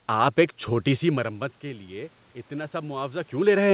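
From 1.12 s to 3.64 s there's automatic gain rising. The input drops by about 16 dB as the talker moves back, and the AGC slowly lifts its gain by about 4 dB, so the voice and room noise swell together across those two and a half seconds.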